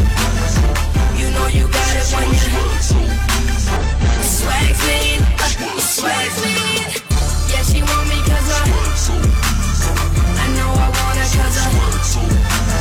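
Three short faults at 3.77–3.82 s, 7.06–7.11 s and 9.85–9.89 s, each about 50 ms, point to damaged data in a compressed stream: the decoder misreads corrupt frames and resyncs.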